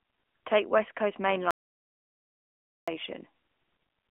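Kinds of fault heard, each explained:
AMR narrowband mobile codec: throughout, the speech is squeezed into a telephone band of roughly 250 Hz to 3.4 kHz with nothing above 3.6 kHz, and a vocal-tract model rebuilding each frame leaves plainly audible buzzy, synthetic coloration, which fits a mid-rate mode around 10.2 kbps.
Audio dropout to silence: from 1.51 s to 2.88 s, about 1.37 s of speech vanishes into silence with no room tone, then cuts back in mid-flow. The likely cause is an input that briefly disconnected or muted while recording continued writing silence.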